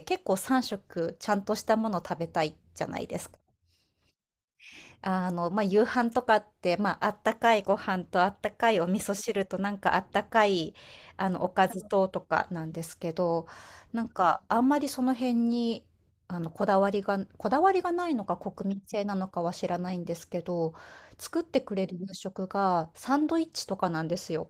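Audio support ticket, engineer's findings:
Nothing to flag on this speech clip; the Opus voice compression shows only light coding traces, consistent with a fullband hybrid setting somewhere around 20 kbps.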